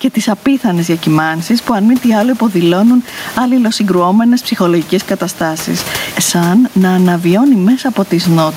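Throughout the speech, gain pumping makes the level swing by around 15 dB. Room noise, about 29 dB below the speech, sits in the background. The likely cause is gain set too high with a fast limiter pulling it down.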